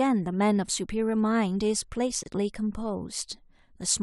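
A speech recording built from separately encoded pieces joined untrimmed leaves the encoder's start-up delay and end padding in place, producing a gap at a join of encoded pieces: a silence of about 26 ms from 2.23 to 2.26 s, smeared at its edges, before the speech resumes.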